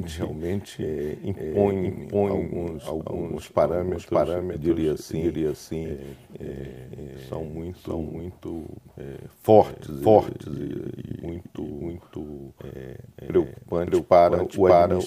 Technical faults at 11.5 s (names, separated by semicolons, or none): doubled audio track